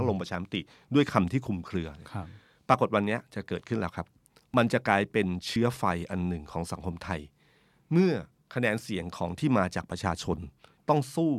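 Dropped buffers (overrun) occur at 0.35, 2.74, 4.54 and 5.56 s, each a jump where the speech skips forward. Around 10 to 40 ms goes missing each time, likely because the program collected its samples late and the hardware overwrote them.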